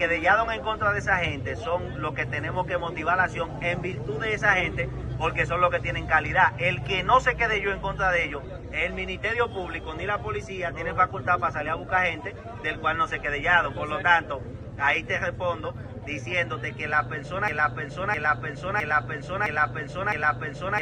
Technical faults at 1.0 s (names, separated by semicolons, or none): none